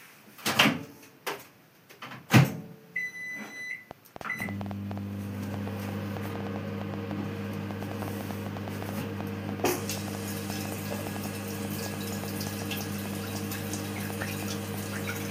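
From 3.91 s to 14.75 s, a train of clicks runs over the sound. Short, similar pulses arrive at about 5.8 per second, roughly seventy in all. The spacing is uneven, so the ticking never settles into a steady beat. Each pulse peaks at about 10 dB above the underlying audio, so it stands out clearly, even in quieter moments. The likely cause is interference from nearby equipment or a faulty connection or power supply injecting repeated pulses.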